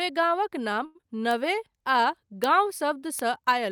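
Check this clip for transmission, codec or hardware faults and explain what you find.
Several transmission faults appear in this speech clip, all in the digital path.

At 0.85 to 0.98 s the sound freezes and is held too long, with a slight buzz or dip. This is a short stall from a late packet: the jitter buffer ran dry, the receiver stretched the last sound for about 96 ms, then resumed where it left off. Nothing was lost, but the delay grew by 96 ms.

From 1.01 to 1.06 s a brief smear replaces part of the sound. This is short concealed packet loss: about 60 ms of audio never arrived, and only 18 ms was filled by extending the preceding sound before blending back. The rest was skipped, pulling the delay back by roughly 40 ms.

Sharp, isolated ticks at 1.31 s, 2.44 s and 3.19 s are bit error spikes. Each is a single corrupted sample whose value jumped by a power of two and snapped back. 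The result is a broadband click unrelated to the speech.

Between 1.55 and 2.02 s the speech drags, running at about 91% speed with unchanged pitch. This is a jitter buffer slow-down: the receiver repeated pitch periods and pause fragments to rebuild its reserve, adding about 48 ms.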